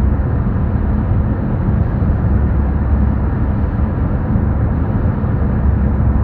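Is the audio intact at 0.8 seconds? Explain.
Yes, at 0.8 seconds the sound is intact, with no fault present at that moment.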